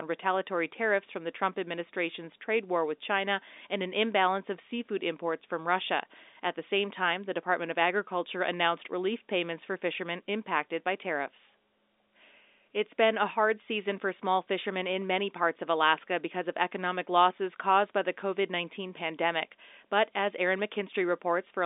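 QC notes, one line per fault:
Nothing stood out on listening, with the speech carried over a normal telephone-band line.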